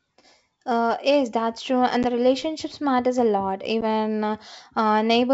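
A hard-edged gap of silence cuts in at 2.03 to 2.05 s, just before "the relationships matters a", and again at 3.81 to 3.85 s, right after "relationships matters a lot". Each gap is followed by briefly, slightly distorted speech. This is packet loss on an ADPCM call: about 10 ms, roughly one packet, goes missing each time. The decoder's predictor and step size then lose track of the sender's until they resync.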